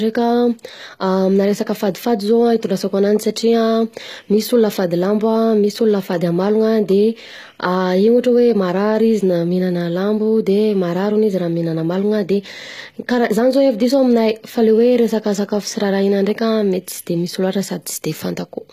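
HE-AAC compression runs throughout the speech, likely from encoding near 20 kbps. The treble is rebuilt by copying lower bands upward. Those copied harmonics don't align with the real ones. S sounds turn gritty and metallic. Nothing is present above about 14.9 kHz.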